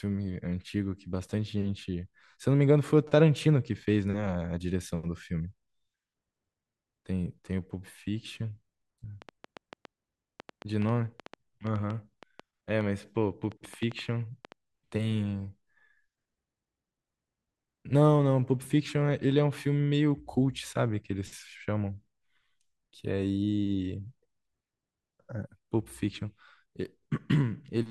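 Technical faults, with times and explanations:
9.22 to 14.53 s, train of clicks: a scatter of sharp, similar-sounding ticks cuts across the speech and the gaps between phrases, arriving at about 5.1 per second but at an uneven pace, some thirty in all, with the loudest peaking roughly 5 dB above the speech. Pulses this alike in shape, repeating at that rate, likely come from electrical interference from nearby equipment or a faulty connection or power supply.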